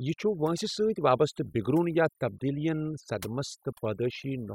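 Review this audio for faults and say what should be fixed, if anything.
Overdone noise removal runs across the whole clip: the noise reduction was set so aggressively that individual frequency bands near its noise estimate are pulled far down or cut entirely, taking the quieter parts of the speech with them. The background drops and breaks up into twinkling specks. To prevent it, apply gentler reduction in stages, capping attenuation and checking that quiet speech stays intact.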